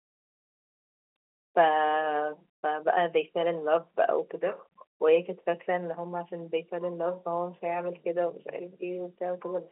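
No technical faults can be heard in the speech, which carries the narrow band of a fixed-line telephone call in G.711 mu-law telephone coding at 64 kbps, with nothing present above about 3.9 kHz.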